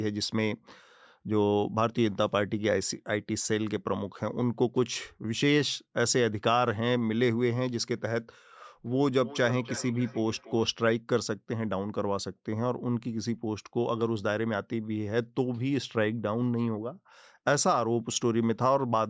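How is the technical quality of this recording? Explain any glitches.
The recording has one glitch, a feedback echo between two devices, running from 9.18 to 10.77 s. The speech comes round again at intervals of roughly 300 ms, with the loudest repeat about 14 dB below the direct speech. Each pass sounds thinner and more ringing than the one before. It happens when two devices in the same room are on the call. One device plays back what the other's microphone sent, and that microphone picks it up again. Each device's echo canceller only removes its own playback, so this loop slips through. The call's microphone processing, which leaves nothing above 8 kHz, works as intended.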